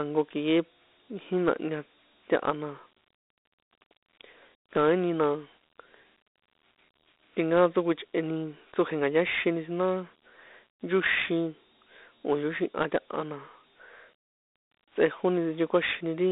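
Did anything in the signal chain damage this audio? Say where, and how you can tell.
Yes, at the codec stage: Dialogic VOX ADPCM throughout. Gritty hiss tracks the speech, and the spectrogram shows a 250 Hz to 3.7 kHz band with a hard ceiling near 3.8 kHz, which fits 32 kbps coding at 8,000 samples a second.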